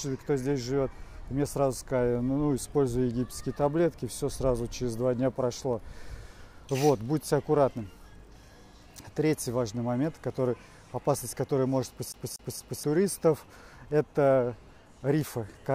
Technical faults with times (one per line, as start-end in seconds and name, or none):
12.12-12.84 CD stuck on one turn